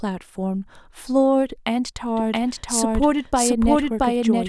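Speech, with a doubled audio track from 2.17 s to the end. A second full-band copy of the speech enters abruptly and runs about 0.7 s behind the original at roughly the same level. It has no decay or room colouring, so it reads as a clean duplicate and not as a reflection. This is likely a second capture through a slower path, or an edit leaving two misaligned copies stacked.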